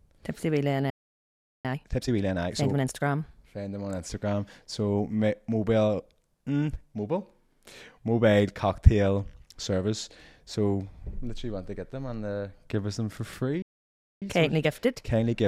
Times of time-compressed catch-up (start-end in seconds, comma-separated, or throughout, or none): 1.65-3.13, 14.22-15.36